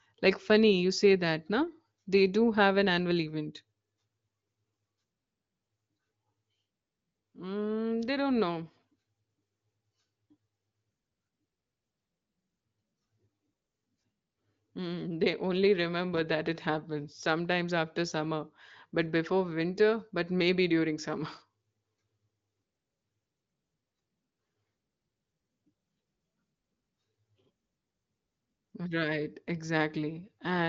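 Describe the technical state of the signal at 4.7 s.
At 4.7 s the speech is intact, carried through the AMR wideband (HD Voice) codec at 18.25 kbit/s with its top end stopping near 7.6 kHz and at most faint coding damage.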